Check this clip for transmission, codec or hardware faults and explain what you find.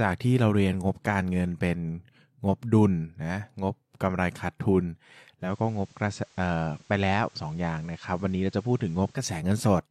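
There's one fault here: the digital radio blending to analogue. At 5.39 s the receiver loses its digital stream and cross-fades over about 143 ms to the station's FM signal, staying there until 9.25 s. You can hear the speech drop about 2 dB in level and pick up a steady FM hiss sitting roughly 30 dB under the speech.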